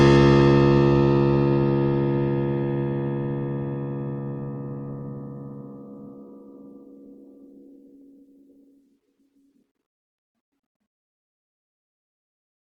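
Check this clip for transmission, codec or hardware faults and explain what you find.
The music shows one codec fault, present throughout.

Opus compression, whole clip: the sound is likely Opus in its music mode at a low rate, fitting about 16 kbps. Band energies are kept but fine detail is filled by folding or noise, so the full bandwidth survives while tones turn grainy, rough and noisy.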